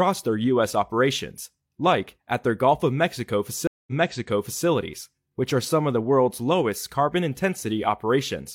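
A speech clip with a stream reconnect from 3.67 to 4.66 s: the waveform drops to a flat 200 ms gap, then a restarted decoder replays sound from 0.79 s earlier.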